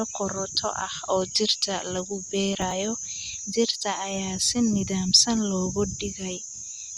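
From 2.53 to 2.72 s there is processor overload crackle. The processor missed a run of buffer deadlines, around seven, each near 10 ms. Each missed buffer was skipped, leaving a hard-edged gap. Together they form a gritty crackle across the speech that stops when the load eases.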